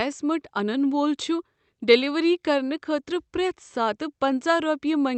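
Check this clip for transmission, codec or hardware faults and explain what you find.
No transmission, codec or hardware faults; the speech carries the ordinary coding character of a WebRTC call path, with the top end limited to about 8 kHz, which fits Opus at around 48 kbps.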